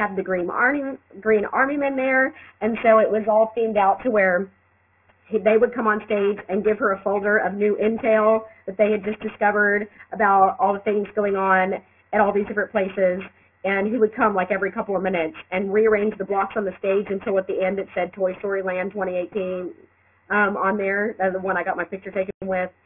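Aliasing runs through the whole clip. The audio was brought down to a much lower sample rate, which fits a resample from 44.1 kHz to 6 kHz, without a low-pass filter first removing everything above the new limit of 3 kHz. Energy that lay above 3 kHz folded back below it onto unrelated frequencies, adding a gritty, metallic haze at about 20 dB under the signal. The spectrum stays full right up to the 3 kHz edge instead of rolling off.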